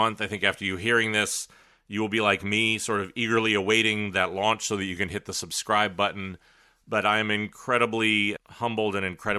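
No technical fault can be heard anywhere in the speech. There is no event to place in time and nothing to describe.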